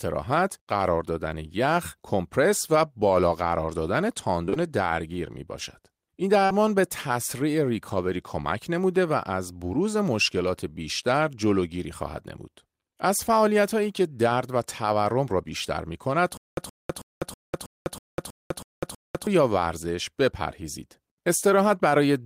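Speech, with two kinds of fault. Short concealed packet loss occurs at 4.45 to 4.58 s as three back-to-back patches, and again at 6.46 to 6.52 s. Each gap is bridged by extending the preceding sound, then fading back into the real signal. The result is a quick smear or wobble, and a brief consonant may drop out. The gap lengths of about 20 ms and 40 ms point to lost 20 ms packets. From 16.37 to 19.27 s there is a stutter with silent gaps. A 120 ms fragment repeats nine times, each followed by about 200 ms of digital silence, on a steady 320 ms cycle. The likely cause is a stalled stream replaying its last buffer at each retry before running dry. Whatever should have played during that stretch is lost.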